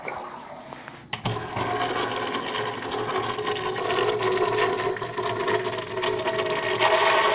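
At 3.78 to 3.80 s the audio makes a skip ahead: about a second of sound is gone, and playback leaps forward with no silence, fill or fade in between. The stretch was discarded in transit or when an overfull jitter buffer shed its backlog, so the two sides butt together almost directly. Unlike a dropout, which leaves an audible hole or concealment noise, this is a sudden jolt in continuity, heard through the call path's band limit of 4 kHz.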